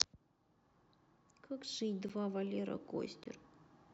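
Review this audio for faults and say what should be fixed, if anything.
Two short blocks of digital silence cut into the speech. The first, about 10 ms long, falls at 2.09 s. The second runs from 3.24 to 3.26 s and lasts 20 ms. In each, the sound drops straight out and returns with no fade. The 10 ms gap sounds like a tick. The 20 ms gap is closer to a brief hole. An output buffer that was not filled in time is the usual cause. To prevent this, give the audio thread more processing headroom or a larger buffer, and guard the processing against invalid numbers.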